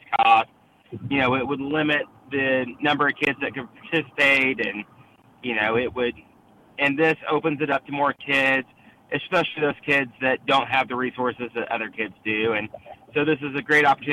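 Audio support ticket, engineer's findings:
Listened through the full recording; nothing stood out that would need a fix.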